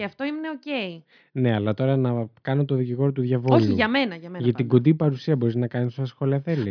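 Nothing in this speech recording stands out as a technical fault, so there's no problem to point to anywhere along its run.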